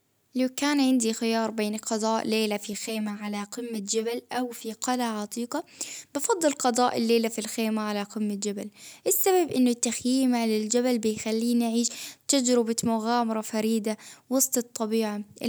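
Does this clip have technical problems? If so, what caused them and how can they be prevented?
Yes. From 2.73 to 4.74 s, between "بين القضاء ليلة في" and "قلعة عتيقة أفضل قضاء", one channel runs roughly 10 ms late before mono summing. This channel delay causes comb filtering, with the first notch near 50 Hz, that makes the speech hollow and phasey. Keeping both channels sample-aligned before any mono fold-down prevents it.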